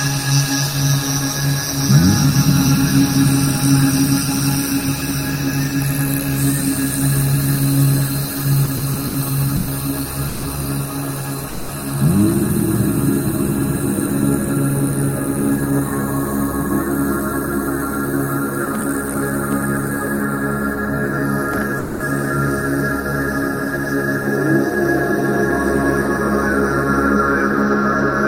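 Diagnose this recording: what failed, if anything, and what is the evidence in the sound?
From 8.65 to 10.45 s the sound drags through six brief held-over gaps, longest 140 ms: repeated stalls (stutter), late network packets repeatedly draining the jitter buffer.

At 11.48 s and 21.79 s the sound holds as a fading buzz or hiss for 0.21 s, then resumes: call audio freeze, likely delayed packets emptying the jitter buffer.

Between 15.50 and 19.15 s the sound runs 3% faster at unchanged pitch: jitter buffer speed-up, trimming pitch periods, about a tenth of a second overall, to cut excess delay.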